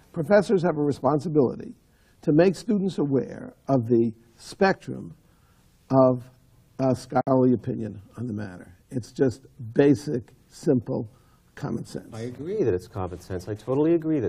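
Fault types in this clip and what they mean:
Gap at a join of encoded pieces: the sound drops out for about 59 ms at 7.21 s, silence that encoder start delay and end padding leave between separately encoded pieces.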